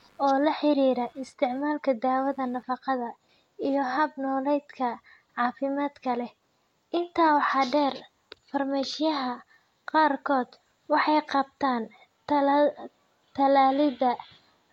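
From the start of the clip to 2.84 s there is computer activity noise under the speech: a faint buzzing chirp pulsing at around a hundred times a second, sitting roughly 40 dB below the speech level. It follows the computer's workload rather than the speech. Current drawn by the processor, graphics card or peripherals shifts the ground shared with the audio circuitry, and those fluctuations are added to the audio path as an electrical buzz.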